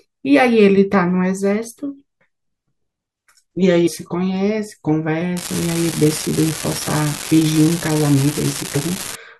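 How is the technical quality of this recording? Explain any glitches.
The speech has two glitches. At 3.86 to 3.88 s there is a brief glitch, typical of damaged data in a compressed stream: corrupted frames confuse the decoder, which loses sync and jumps to the next valid frame header.

From 5.37 s to 9.15 s a steady crackling fizz runs underneath, continuing through the pauses. It points to an unreliable data bit: one marginal data line flips its bit in a random share of samples, and each error becomes a spike of identical size.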